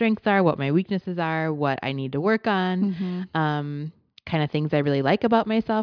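No technical faults are audible anywhere in the speech.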